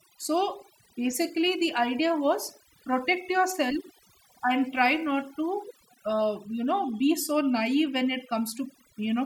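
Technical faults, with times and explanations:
Throughout, overdone noise removal: the noise reduction was pushed too hard on a noisy speech recording, so it clamps down on frequency bands it mistakes for noise and takes the quieter parts of the voice along with them. The background drops and breaks up into little twinkling specks.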